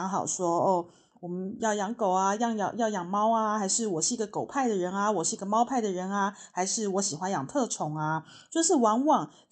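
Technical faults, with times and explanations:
No technical faults found; the speech carries the character of a WebRTC call path, with its top end stopping at 8 kHz, which fits Opus at 64 kbps.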